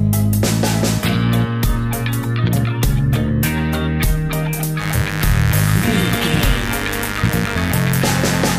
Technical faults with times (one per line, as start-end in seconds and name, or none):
4.77-8.59 mains buzz